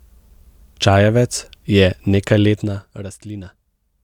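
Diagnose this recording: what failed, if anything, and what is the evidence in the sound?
Zipper noise from 2.44 to 3.12 s: a roughly 15 dB level drop ticks in steps about 50 times a second, which fits per-buffer gain updates without smoothing.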